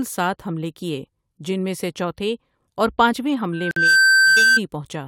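At 3.52 s a loudspeaker feedback squeal begins. A microphone is picking up the loudspeaker it drives, and at 1.6 kHz the loop gain has passed unity, so that single tone feeds on itself. It swells over roughly a third of a second to about 10 dB above the speech and holds until 4.60 s. The gradual self-building rise is what separates it from a steady interfering tone or hum.

Inside the squeal, from 3.71 to 3.76 s, there is a gap at a join of encoded pieces: a 52 ms hole of silence with smeared edges. The audio was encoded in separate sections, here cut every 6 s, and joined untrimmed, so one encoder's start-up delay and the previous piece's padded final frame sit back to back. Unlike a packet dropout, nothing is lost. The sound resumes exactly where it stopped.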